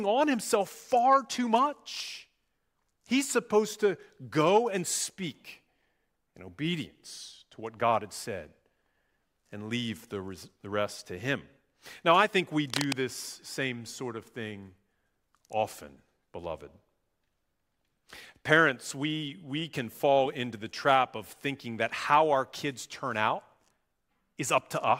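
A speech clip with cable scratch noise from 12.67 to 12.94 s, between "I think we" and "this same sort of": a quarter-second of rough, uneven scratching only slightly quieter than the speech, likely from a worn cable or connector being moved. The waveform shows jagged, irregular spikes, and the spectrogram shows dense broadband speckle.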